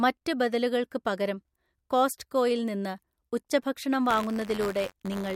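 From 4.08 s, just after "പകരം കോസ്റ്റ്കോയിൽ നിന്ന് ഉച്ചഭക്ഷണം", buffer tearing gives a robotic 93.8 Hz buzz through the end. A small slice of each period replays audio some 30 ms old, and the buzz rate fits a 512-sample buffer.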